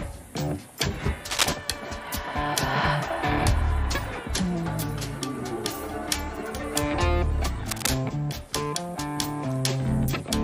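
Cable scratch noise appears twice, from 1.30 to 1.47 s, clearly louder than the sound, and from 7.66 to 7.90 s, somewhat quieter. Each is a dense, irregular rustle lasting a fraction of a second, likely from a worn contact shifting, unlike a single sharp click.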